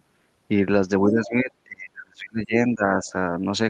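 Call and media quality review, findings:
Speech suppressed in double talk, 1.03 to 3.09 s. Speech level drops in chunks, deepest dip about 30 dB, around 1.5 s attenuated in total. Likely cause: echo canceller misreading near-end speech as loudspeaker echo during simultaneous talk, attenuating both.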